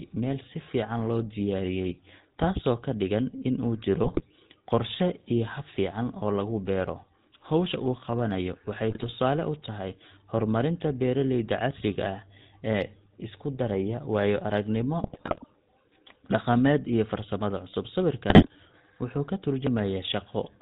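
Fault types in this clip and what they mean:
GSM full-rate codec: the whole clip has that buzzy, gravelly GSM edge, with nothing above 4 kHz, which fits the old 13 kbps full-rate speech codec.
GSM bit errors: corrupted frames reaching the decoder warp the spectrum or level, giving brief squawky, gargling bursts at about 4.0, 8.9, 15.0 and 18.3 seconds.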